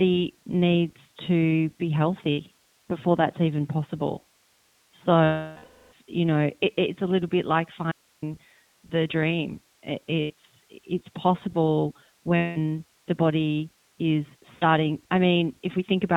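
Throughout, the speech passes through the iLBC codec, whose band-limiting to 4 kHz and frame-by-frame excitation coding leave it audibly rough and synthetic, consistent with the 15.2 kbps, 20 ms frame mode.

Lost iLBC frames at 2.30–2.42 s, 5.24–5.94 s, 10.20–10.33 s, 12.36–12.58 s and 14.54–14.64 s make the decoder repeat the last pitch cycle with noise. Each gap becomes a held, buzzy vowel; the 680 ms loss fades audibly before recovering.

At 7.92–8.22 s, an audio dropout to a faint residue, likely a break upstream of a live path, leaves about 305 ms of hiss roughly 40 dB down, cutting off abruptly.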